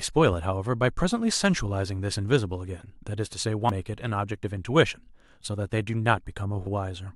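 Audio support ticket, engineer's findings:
Damaged data in a compressed stream at 3.69 s: brief glitch breaking into the speech. Probable component: compressed file or stream upstream of decoder. Corrupted bytes in a frame; decoder misreads or rejects it, loses sync, scans for next frame header.

Same fault at 6.67 s: second short glitch, same mechanism. Decoder again drops out of sync on a bad frame and recovers at the following header. Two isolated hits point to localized corruption in transport or storage.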